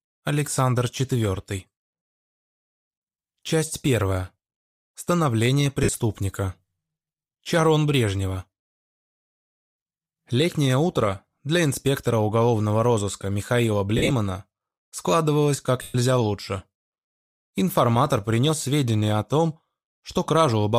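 Lost LE Audio frames break the Bluetooth link three times, and each time the LC3 decoder fills the gap by replaying the last spectrum with random signs, then fading it. At 5.83 to 5.89 s about 53 ms goes missing, which fits seven 7.5 ms frames. From 13.97 to 14.11 s the losses are scattered, with the longest run around 50 ms. At 15.82 to 15.95 s a 120 ms gap becomes a noisy smear that sinks toward silence. The light coding loss underneath stays faint.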